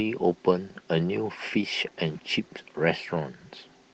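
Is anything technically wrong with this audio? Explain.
No, nothing is technically wrong.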